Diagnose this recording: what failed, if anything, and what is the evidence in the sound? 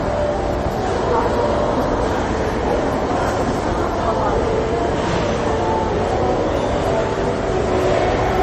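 The codec stage failed. Plainly audible MP3 compression runs through the whole clip, likely from an encoder starved of bits, which fits a bitrate around 40 kbps. To save bits, it discarded everything above 14.3 kHz and zeroed weak frequency lines frame by frame. A spectrogram shows a hard ceiling at 14.3 kHz, with faint components flickering on and off below it. The sound is watery and swirly, and the waveform shows smeared, blurred attacks.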